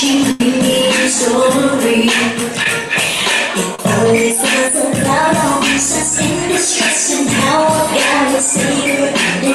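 A burst of packet loss at 0.31 to 0.41 s removes about 90 ms of the audio. The receiver covers roughly 80 ms of that hole by extending whatever was playing just before and letting it fade, which comes across as a held buzz or dying hiss. The sound then picks up from a later point, so the stretch in between is simply gone rather than delayed. Short concealed packet loss appears twice, at 2.64 to 2.66 s and at 3.75 to 3.79 s, with about 10 ms and 30 ms of audio missing respectively. Each time the decoder patches the gap by continuing the preceding sound, pitched if it was tonal and as noise if not, then crossfades back into the real signal. The result is a brief smear or flutter, shorter at 2.64 s than at 3.75 s, where any quick transient falling in the gap can disappear.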